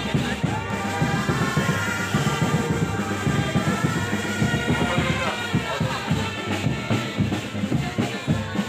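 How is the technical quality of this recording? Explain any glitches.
There's one clear problem: a doubled audio track from 0.70 s to 5.30 s. For that stretch, a second full-band copy of the sound runs about a tenth of a second behind and roughly as loud as the original, which gives a slapback echo with no decay or room colour. The likely cause is the signal being captured twice, with one copy arriving through a slower path. The double cuts in and out abruptly at both ends.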